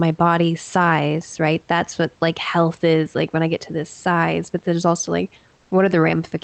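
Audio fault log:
5.57–5.71 s, comfort noise in place of the background: for about 140 ms the room's real noise, roughly 41 dB under the loudest speech, turns into a smooth, detail-free hiss about 1 dB quieter, likely the receiver filling a discontinuous-transmission gap, which fits Opus DTX.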